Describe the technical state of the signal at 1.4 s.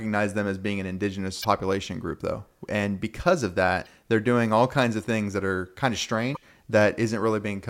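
Right at 1.41 to 1.45 s, just after "them as being an" and before "group though", there's damaged data in the compressed stream. Some bytes there are corrupted, so the decoder misreads those frames, loses sync and hunts for the next header, which you hear as a short blip lasting about 40 ms.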